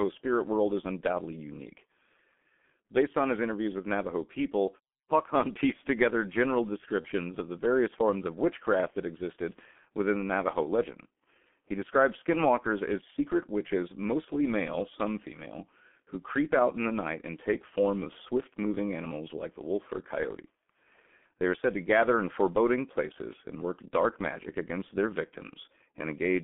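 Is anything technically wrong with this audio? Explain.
Yes, two faults. Throughout, the G.723.1 codec at 6.3 kbit/s leaves the speech muffled and hoarse with smeared consonants. A spectrogram shows energy confined to about 200 Hz to 3.4 kHz.

From 7.01 to 7.08 s, between "pieced together general" and "of the various forms", there is VoIP packet loss concealed by the speech codec. The decoder extrapolated its last pitch and filter, so the gap is filled by a short, fading stretch of buzzy tone or coloured noise, consistent with one lost 30 ms frame. The waveform shows a repetitive, decaying stretch there.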